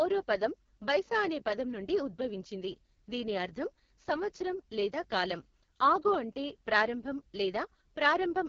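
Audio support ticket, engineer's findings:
AMR wideband (HD Voice) codec, throughout. Speech rough, raspy. No content above 7 kHz; top band above 6.4 kHz is shaped noise. Probable component: AMR-WB encoder in the call path. Coarse pulse coding of the vocal tract model at heavy compression, pointing to the 6.6 kbit/s lowest mode.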